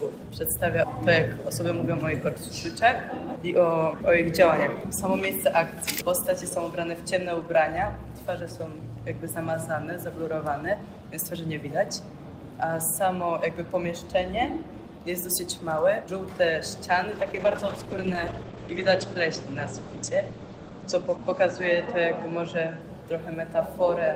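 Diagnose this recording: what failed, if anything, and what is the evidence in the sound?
Call bitrate drop at the codec, 17.14 to 22.87 s: starved of bits, fitting about 11 kbps, the encoder codes coarsely, leaving rough, muffled sound cut off above 8 kHz.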